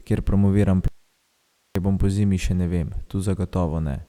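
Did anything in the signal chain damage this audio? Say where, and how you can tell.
Yes. From 0.88 s to 1.75 s the speech drops out to an audio dropout to a faint residue. For about 0.87 s only hiss remains, about 45 dB below the speech, before the signal snaps back just ahead of "bom pozimi". On a waveform the envelope collapses to a thin noise band with vertical edges. A spectrogram shows a broadband haze with no harmonics. The live hiss points to a likely analogue wiring fault, such as an intermittent connector that briefly disconnected the source.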